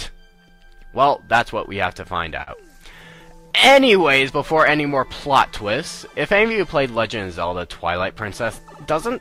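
Small timing hiccups recur at uneven intervals across the whole clip. This is clock drift between sender and receiver: the sender's clock runs roughly 2% slow, so the receiver's jitter buffer keeps draining and the receiver must compensate.

From 0.34 s to the end, playback runs a little slow, at about 99% speed. These are repeated timing corrections: the receiver repeats short pieces, all in the same direction, adding up to around 150 ms in total to stay in step.

From 2.43 s to 2.50 s, a sound is held too long for 42 ms. This is a short stall from a late packet: the buffer ran empty, the last sound was stretched until the packet arrived, and playback resumed where it stopped. Nothing is lost, but delay grows by 42 ms.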